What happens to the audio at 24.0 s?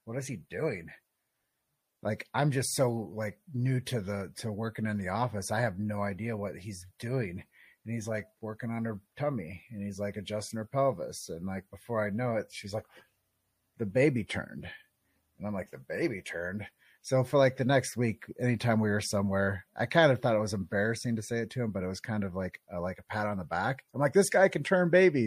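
At 24.0 s the audio is still carrying the MP3 compression damage that runs through the whole clip, most likely from encoding at a low bitrate, around 64 kbps by the sound of it. Short of bits, the encoder cuts off the treble at a fixed frequency and drops quieter frequency lines that flicker in and out from frame to frame. The result is plainly audible: a dull top end, a watery, swirling texture, and smeared attacks.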